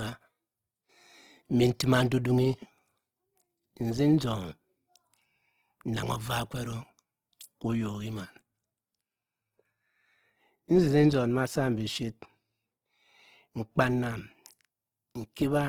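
Throughout, the speech sounds grainy, rough and noisy in its upper bands; this is likely Opus compression in music mode, consistent with about 16 kbps.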